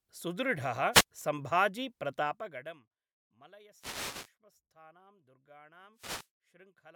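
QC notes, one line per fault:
0.92–1.04 s, 3.73–4.35 s, 5.92–6.31 s, wireless microphone noise hit: the FM radio link fades as reflections cancel, and receiver noise surges into bursts of static over the speech.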